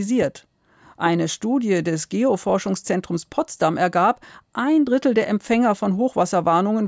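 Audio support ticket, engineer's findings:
Listened through the whole speech recording and nothing turned up worth flagging, so there's no fault to log against any component here.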